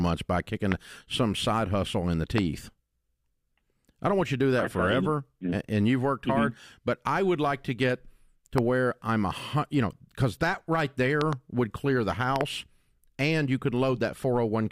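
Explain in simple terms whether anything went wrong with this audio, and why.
A sudden electrical jolt, likely from a plug, switch or static, got into the signal and caused loud pops. Single pops hit at 0.72, 2.38 and 8.58 s, and double pops at 11.21 to 11.35 s and 12.36 to 12.43 s. Each jumps well above the speech, which continues underneath.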